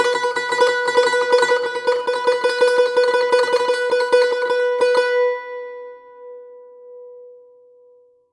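Nothing technical goes wrong anywhere in this bit of music; there's simply no fault to hear.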